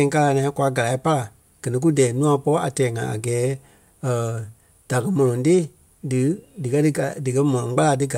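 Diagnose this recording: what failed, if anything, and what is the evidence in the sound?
Nothing failed in this recording, and the sound gives no evidence of a fault at any stage.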